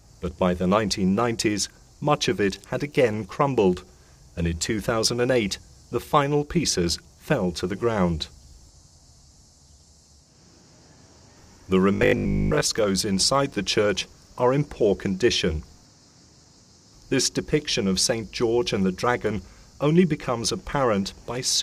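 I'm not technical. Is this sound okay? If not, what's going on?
No. From 11.95 to 12.63 s the sound turns into a rigid, metallic buzz, a robotic sound from repeated short buffers. Audio is likely arriving too slowly, so tiny 20 ms pieces repeat, skipping most of the real sound and forcing a steady 50 Hz drone.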